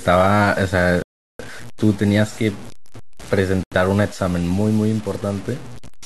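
From the first moment to the end of the speech, a grainy, rasping distortion rides on every syllable. It is most likely low bit depth without dither: the level has been truncated to very coarse steps, which fits about 6 bits, leaving an error roughly 20 dB below the speech. Unlike steady hiss, this grit follows the speech itself, roughening quiet tails and dropping to silence or sputtering in the gaps rather than hanging over them.

At 1.02 s the speech cuts out completely for 371 ms, returning at 1.40 s. A second, shorter break runs from 3.63 s to 3.72 s, lasting 83 ms. Both are likely Bluetooth stalls, in which delayed wireless packets left the receiving buffer empty so playback simply halted. What separates these from a clipped edit or an error-concealment glitch is the clean, total silence with nothing smeared or repeated across the gap.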